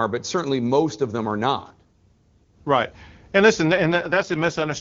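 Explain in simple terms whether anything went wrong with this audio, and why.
From 3.68 to 4.72 s there's an AMR rate drop: the call codec switched to a much lower rate, so the speech turns rough and synthetic.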